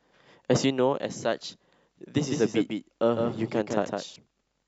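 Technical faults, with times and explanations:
2.16 to 4.16 s, doubled audio track: a second full-band copy of the speech trails the original by roughly 150 ms at about 5 dB down. It has no decay or room colour and cuts in and out abruptly, so it's likely a slower second capture path or an out-of-step edit.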